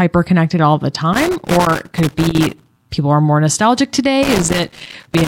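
Around 1.13 s the speech picks up a loose connector crackle that runs until about 2.82 s, then it comes back at 4.23 s and carries on to the very end at 5.27 s. It's that irregular scratchy burst you get when a worn or grubby contact keeps making and breaking as it shifts, chopping the signal into fragments, with pops wherever a bit of DC on the line jumps across the gap.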